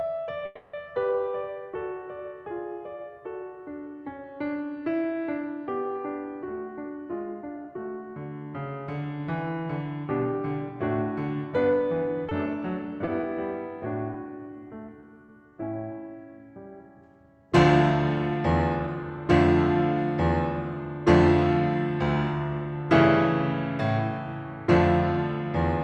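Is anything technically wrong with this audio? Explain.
Yes, this music clip has several call-transport faults.

From 0.45 to 0.75 s there's a call audio freeze: the last sound hangs as a fading buzz for about 280 ms, likely because delayed packets emptied the jitter buffer. Nothing's lost, it just restarts late.

From 6.68 to 7.73 s a jitter buffer speed-up trims tiny pitch-period slices to catch up. The music runs at about 115% with pitch unchanged, so the tempo feels rushed.

Short concealed packet loss hits at 12.29, 13.05 and 13.21 s. Each time about 20 ms never arrived and got patched, leaving a quick smear or wobble.

From 14.13 to 15.54 s there's repeated packet loss with a robotic sound. Six small holes, roughly 100 ms missing in total, are each papered over, giving choppy stutters. Throughout, the top end stops around 12 kHz, as the call codec passes it.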